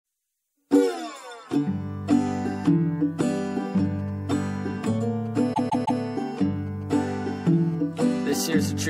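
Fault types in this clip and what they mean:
GSM signalling bursts: From 3.52 to 6.92 s, quiet galloping dit-dit-dit ticks and brief 217 Hz buzzes from a nearby 2G phone signalling, arriving in short groups rather than continuously.
repeated frames: A 0.16 s chunk of the music plays three extra times between 5.53 and 6.00 s, a stutter that lengthens the audio by 0.47 s rather than dropping anything.
GSM phone buzz: From 6.92 to 7.75 s, a hard, raspy 217 Hz buzz rich in harmonics at about -26 dB below the music, steady as in a call rather than galloping.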